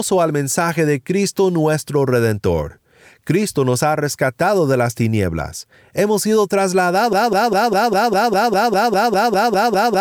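At 7.13 s the speech locks into a broken-record loop. A fragment about 0.2 s long repeats exactly, back to back, 14 times, until the clip ends. A stalled player or stream likely kept resending its last buffer. The speech meant for those seconds is lost.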